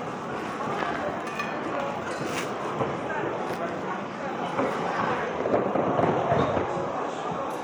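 No technical faults can be heard anywhere in this recording of sounds, so the signal arrives intact throughout.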